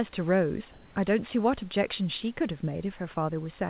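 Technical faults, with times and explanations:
0.72 to 0.96 s, comfort noise in place of the background: for 240 ms the real background, about 29 dB below the loudest sound, turns into a steady, featureless hiss shifted by about 4 dB, likely because the sender stopped transmitting and the receiver synthesised filler noise.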